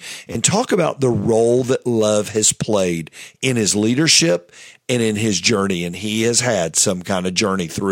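Two quick repeated-buffer stutters, at 0.33–0.35 s and 4.12–4.16 s. An 11.6 ms slice (fits a 512-sample buffer) replays two, then three, extra times when new audio arrives late. Each sounds like a brief buzzy click with hard joins.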